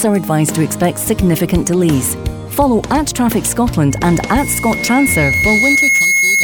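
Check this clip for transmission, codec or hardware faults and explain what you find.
One fault is present: loudspeaker feedback squeal from 3.90 s to the end of the clip at 6.43 s. The microphone picks up the loudspeaker it drives, and at 2.2 kHz the loop gain exceeds one, so that tone reinforces itself on every pass. It swells over roughly two seconds into a piercing steady squeal that ends up about as loud as the sound itself.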